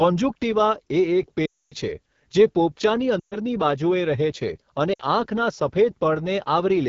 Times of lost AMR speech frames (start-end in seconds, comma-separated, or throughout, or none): 1.46-1.74, 3.19-3.36, 4.93-5.01